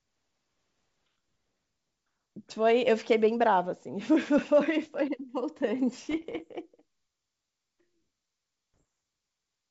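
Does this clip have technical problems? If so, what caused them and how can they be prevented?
Yes. Bit errors on an ADPCM link hit at 4.38 s, 6.11 to 6.43 s and 8.74 to 8.85 s. Flipped bits in the G.722 stream knock the decoder's step size and predictor off track, so each hit rings on as pops, rough bursts and brief level jumps. Error detection with concealment on the link, or a cleaner radio or line path, would prevent this.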